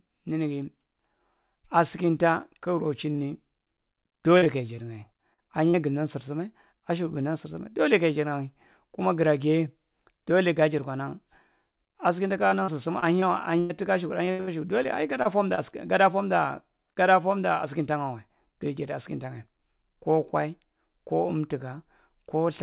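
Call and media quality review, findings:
Short concealed packet loss, 3.12–3.20 s: two back-to-back 20 ms holes, about 40 ms filled in total. Jitter buffer/decoder concealment extended the preceding sound, then crossfaded back. Heard as a single brief smear. One isolated event, unlike the sustained choppiness below.

Repeated packet loss (robotic sound), 4.38–5.76 s (five gaps, longest 44 ms) and 12.48–15.59 s (eleven gaps, longest 98 ms). Losses recur every few hundred ms. Concealment is chained, giving choppy sound with missing fragments. The duration and recurrence distinguish it from a lone concealment tick. The narrowband band limit, nothing above 4 kHz, points to G.711 mu-law at 64 kbps.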